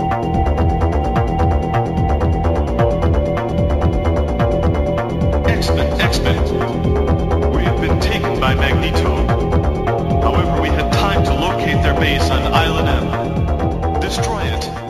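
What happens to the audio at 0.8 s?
At 0.8 s the audio carries imaging from linear upsampling, present across the whole clip. The sample rate was raised from 16 kHz to 44.1 kHz by drawing straight lines between samples, a weak interpolation filter. It dulls the top of the original band and leaves a mirrored copy of the spectrum in the 8 to 16 kHz region, roughly 35 dB below the signal, heard as a metallic shimmer on bright, high-frequency sounds.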